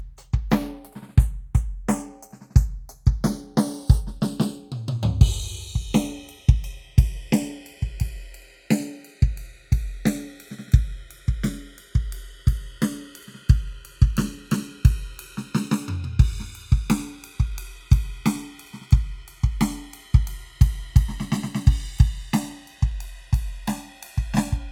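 Right through the music, the channels are drifting apart: separate clocks about 50 ppm off slide the delay to roughly a millisecond, so mono sums get slow flanging.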